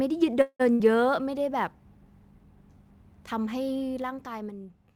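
A faint hiss and roughness rides on the speech throughout, swelling on loud and bright sounds and vanishing in the pauses. That is sample clock jitter: a timing wobble of a few microseconds in the converter clock leaves an error around 40 dB below the signal, and that error grows with how steeply the waveform moves. From 0.41 to 0.62 s the sound stretches into a fading buzz, drops to about 60 ms of silence, then carries on where it stopped. Nothing is lost, but roughly 0.18 s of extra delay is added. This call audio freeze was likely caused by packets held up in transit, which drained the jitter buffer. Between 0.74 and 0.81 s there is another brief held, fading fill, but here about 60 ms of audio is skipped when playback resumes. That is a burst of packet loss, where late or dropped packets were concealed and then jumped past. From 3.9 to 4.68 s, faint ticking follows the level as it falls by about 10 dB. 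This zipper noise comes from a gain change applied in unsmoothed 3 dB steps, roughly four per second, with each step clicking.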